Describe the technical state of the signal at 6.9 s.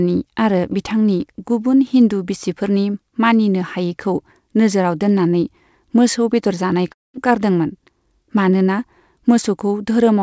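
At 6.88 s the sound smears briefly, a short wobble lasting until 6.92 s. This is short concealed packet loss: about 20 ms of the stream arrived too late for the decoder, so the receiver stretched the preceding sound across the gap, about 25 ms of filler in all, and blended it back toward the real signal.

From 6.92 s to 7.16 s the concealment continues as a fading buzz and then gives way to near silence for roughly 190 ms before the audio resumes, with about 220 ms never played. This is a long network dropout, likely caused by a stretch of packets that never arrived at all. The receiver extended the last sound as far as it reasonably could and let it decay, so the audio that returns picks up later, with the missing portion simply absent. Throughout, the band stops at 8 kHz, which fits a wideband call codec.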